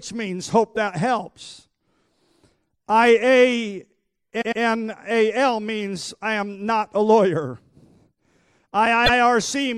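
At 4.40 s the speech stutters: a 104.5 ms block plays twice more, adding 209 ms. A shorter one follows at 9.05 s, a 78.4 ms block repeated once. These are repeated frames, where a run of compressed frames got written or sent again and the decoder dutifully replays them. The block lengths fit runs of about four and three frames.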